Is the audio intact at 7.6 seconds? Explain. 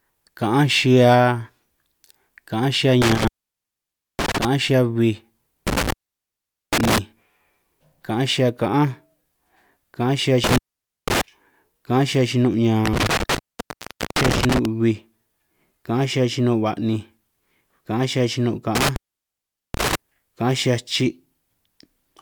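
Yes, the speech at 7.6 seconds plays through cleanly, with no dropout, click, distortion or other fault at that moment.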